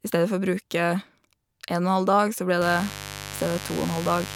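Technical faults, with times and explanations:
2.61 to 4.36 s, mains buzz: A steady, raspy buzz enters and runs to the end, fairly loud against the speech. Sharp switching spikes, twice per 50 Hz cycle, leak into the signal. Their dense 50 Hz harmonics stretch up to several kHz, giving the rasp.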